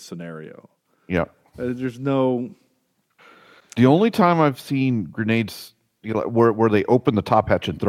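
No technical faults can be heard anywhere in the speech. Nothing in the sound points to a problem in the path that recorded or carried it.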